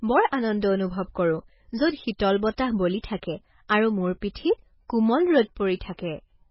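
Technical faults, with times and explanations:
Throughout, MP3 compression: the speech has nothing above 5.6 kHz and sounds heavily watery and swirly, likely from an encoder starved of bits, consistent with about 16 kbps.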